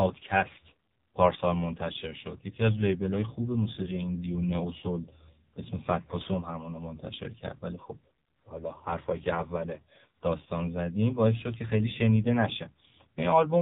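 Speech heard through the AMR narrowband mobile codec for its whole length. Nothing reaches above 4 kHz, and the voice has a heavily buzzy, synthetic quality, which points to a very low rate, around 5.9 kbps. Unlike a plain telephone-band filter, which only removes the high end, this codec rebuilds each 20 ms frame from a vocal-tract model fed by a few pulses. That rebuilding is why the voice itself sounds artificial rather than merely muffled.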